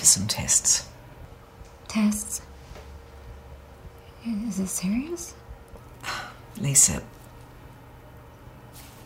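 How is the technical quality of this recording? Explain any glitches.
The technical quality of the recording is sound, with no glitches to explain.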